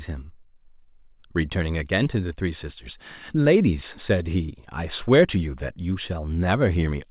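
At 2.04 to 2.08 s there is a short concealed packet loss: about 20 ms of speech arrived too late, and the receiver extended the preceding sound across the gap before blending back, heard as a brief smear rather than silence or a sharp click, over audio band-limited to 4 kHz by the call codec.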